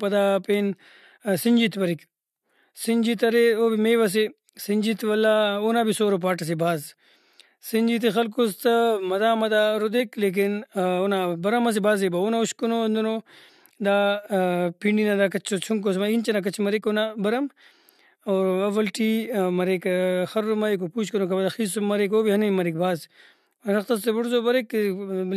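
At 9.96 to 10.01 s the speech breaks: compressed frames skipped, so about 20 ms of audio never plays and the sound jumps ahead. At 16.80 to 16.82 s a quiet error peaks around -40 dBFS, a corrupt frame decoded, where damaged data across what sounds like a couple of frames puts energy at wrong frequencies.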